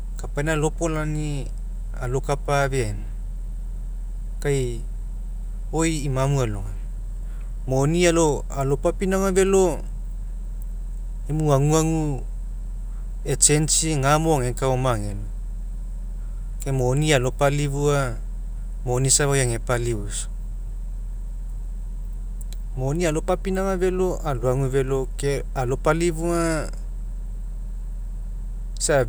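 Nothing stood out as a problem on listening to this recording.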